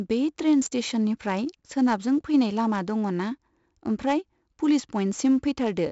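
4-bit ADPCM compression runs through the whole of this speech clip, and the damage is heavy. Each sample is coded as a coarse 4-bit step from a predicted value, so the coding error becomes a gritty hiss that rises and falls with the speech, with roughness on sharp onsets where the step size lags behind. Nothing sits above 7.7 kHz, which points to a sample rate near 16 kHz and fits a 64 kbps stream, and it dulls the top end.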